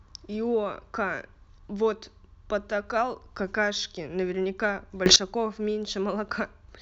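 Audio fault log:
5.06–5.16 s, sudden gain jump: the speech and the background noise step up in level together by about 16 dB, with no fade between the two levels. This is likely a digital gain setting or bit shift applied from one sample to the next.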